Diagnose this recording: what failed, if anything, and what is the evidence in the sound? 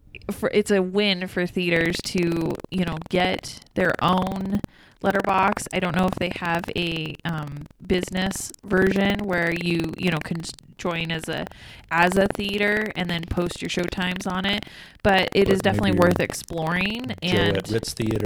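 Buffer tearing at the driver or buffer stage, from 1.72 s (just after "it's a win for") to the end: a steady robotic rattle at 21.5 Hz, fitting a 2048-sample buffer. The writer and reader cross each period, so a small slice of each buffer replays audio about a tenth of a second stale, with hard joins.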